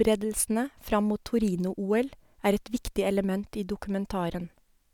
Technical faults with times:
none

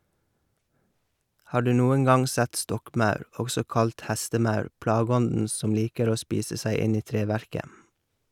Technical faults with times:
none

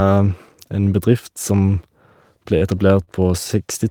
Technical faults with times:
3.04-3.09 short stall from a late packet

